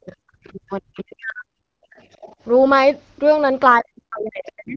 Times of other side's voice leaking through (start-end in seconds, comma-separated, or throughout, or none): 0.46-0.52, 0.95-1.02, 1.97-2.36